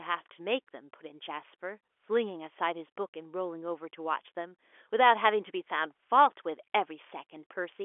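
No technical faults can be heard in the speech. The G.711 telephone coding is working as a telephone line should, with the sound held to roughly the 300 Hz to 3.4 kHz band and nothing above about 3.7 kHz.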